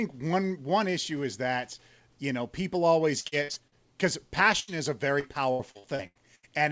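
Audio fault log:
3.20–3.75 s and 5.20–6.46 s: repeated packet loss (robotic sound). The first stretch has five short holes and the second has seven. The longest holes run 44 ms and 85 ms. Each hole is filled by stretching the previous sound, so roughly a third of each span is patched. It sounds choppy, with pieces missing.
4.60–4.71 s: burst of packet loss. About 80 ms of audio drops out in one run. The receiver carries the last sound forward and fades it, giving a brief held buzz or hiss. The sound then resumes further on, with the part in between missing.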